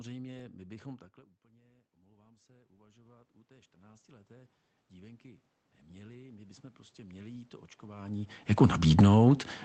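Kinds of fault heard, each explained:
Automatic gain rising: after the voice drops about 24 dB near 1.5 s, gain climbs about 26 dB until 9.5 s; waveform envelope and noise floor swell together.
Automatic gain falling: from 8.84 to 9.17 s gain eases down about 4 dB, so speech and background shrink together, a gentle taper visible across the whole spectrogram.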